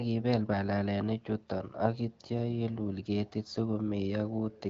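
Nothing stood out as a technical problem on listening to this speech, which comes through the AMR wideband (HD Voice) codec at 12.65 kbit/s.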